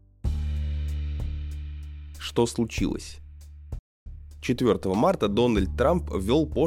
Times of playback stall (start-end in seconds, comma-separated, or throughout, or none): 3.79-4.06